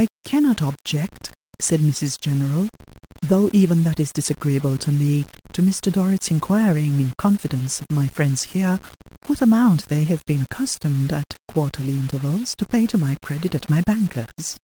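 From the first moment to the end, the speech carries a grainy, rasping distortion that tracks the sound. Quiet sounds are coated in grit, and the quietest tails break into a sputter or drop to silence. The likely cause is low bit depth without dither. The level is rounded to very few steps, which fits a 6-bit signal, leaving error only about 25 dB below the speech. On a waveform the quiet passages show visible staircase steps and flat runs. On a spectrogram the harmonics sit on a raised, speckled haze that appears only where there is sound and vanishes in the gaps.

Running underneath the whole clip is clock drift between sender and receiver. The sending side's clock runs about 4% faster, so audio arrives slightly quicker than it is played out. The receiving buffer keeps filling and must shed material to avoid overflowing. This is heard as the speech never sitting quite steady in time, with small timing hiccups recurring at uneven intervals. 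On a spectrogram the syllable rhythm looks subtly uneven rather than smoothly spaced.

From 0.21 s to 13.95 s come repeated timing corrections. The receiver keeps cutting short slices out of the speech to bring playback back in step with the 104% rate. Every edit removes material, and the cuts fall at uneven intervals. Each is small, heard, if at all, as a slight hiccup, and the tempo feels faintly unsteady. On the waveform, brief seams appear where the cycles join abruptly. On a spectrogram, harmonic lines show tiny vertical discontinuities at each splice.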